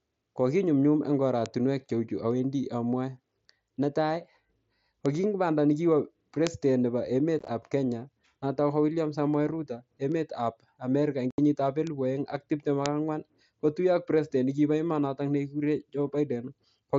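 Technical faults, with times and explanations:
1.46, 5.06, 6.47, 10.12, 11.87 and 12.86 s: bit error spike. Each is one sharp, full-band tick unrelated to the speech. A single flipped bit throws one sample, or three in a row at 6.47 and 12.86 s, off by a power of two before it snaps straight back.
7.39 to 7.48 s: unconcealed Bluetooth headset packet loss. Across about 90 ms, several short gaps of silence, none longer than 15 ms, break up the speech with abrupt edges. Lost headset packets were replaced by nothing instead of concealment, so the sound is briefly chopped.
11.31 to 11.38 s: unconcealed Bluetooth headset packet loss. A solid hole of about 75 ms cuts the speech off and brings it back with hard edges. Consecutive headset packets went missing, and no concealment filled the gap.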